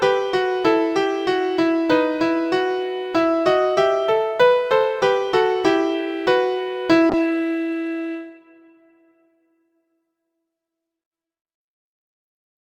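At 7.11 s the call bitrate drops: the bandwidth estimate falls and the encoder is forced onto far fewer bits, consistent with a slide from 64 to 22 kbps. The audio turns coarse and watery, its top end cut from 20 kHz to 12 kHz, staying degraded through the end.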